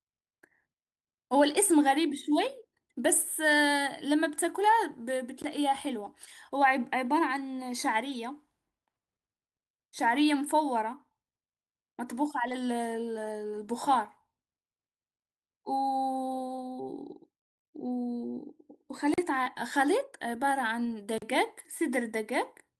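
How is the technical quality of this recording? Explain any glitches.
The speech is marred by three kinds of network and playback glitch, spread through the clip.

A block of digital silence appears at 5.42 s (about 19 ms), 19.14 to 19.18 s and 21.18 to 21.22 s. The sound cut out and back abruptly, with no fade. On a waveform this shows as a flat line, and on a spectrogram as a blank vertical gap.

A lost packet rebuilt from error correction occurs at 6.05 to 6.07 s (20 ms) and at 8.09 to 8.15 s and 12.47 to 12.53 s (40 ms each). Low-bitrate backup copies filled these spots, sounding briefly rough and noisy.

Short concealed packet loss hits 16.55 to 16.59 s and 19.43 to 19.48 s, each about 20 ms. The decoder extended the preceding sound to cover the missing audio, giving a brief smear. On a spectrogram it appears as smoothed, repeated harmonics.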